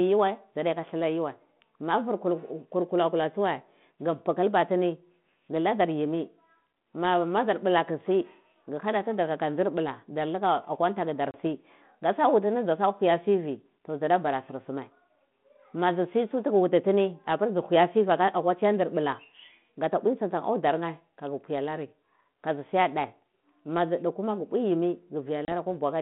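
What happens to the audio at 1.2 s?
At 1.2 s the speech passes through intact, with only the narrow telephone band of its G.726 ADPCM coding to be heard.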